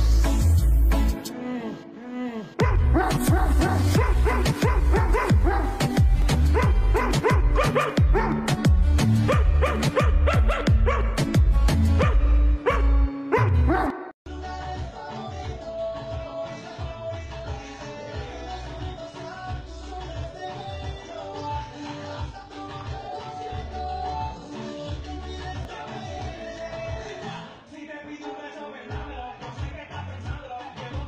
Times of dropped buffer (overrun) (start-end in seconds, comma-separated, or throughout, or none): 6.22, 25.65